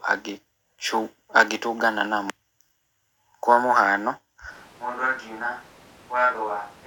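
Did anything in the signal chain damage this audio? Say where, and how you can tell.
Yes. At 4.52 s, right after "kwa mũhano", the speech turns abruptly roomy and hollow, thins in the bass and drops about 10 dB. Room noise rises to about 25 dB below the speech. This lasts to the end. It is a switch to a distant microphone, likely from the close microphone's signal dropping out at the input stage.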